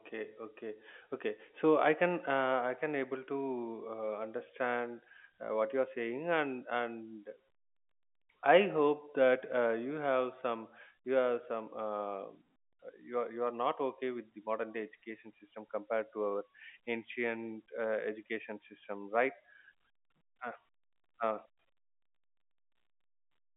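Speech carried over a G.711 telephone path, band-limited to roughly 200 Hz to 3.4 kHz with nothing above 3.7 kHz, and no faults are audible.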